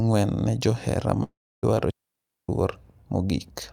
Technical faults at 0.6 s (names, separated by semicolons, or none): none